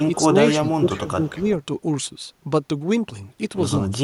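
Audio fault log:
0.51–1.17 s, speech suppressed in double talk: the voice dips in pieces by up to about 15 dB, roughly 300 ms in total, likely an echo canceller muting both sides during overlap. The waveform shows notched envelope gaps.
1.23–1.43 s, echo leak: a faint copy of the speech returns 221 ms late, about 25 dB down, likely loudspeaker pickup the canceller failed to remove. The spectrogram shows weak harmonic traces offset in time behind the louder original.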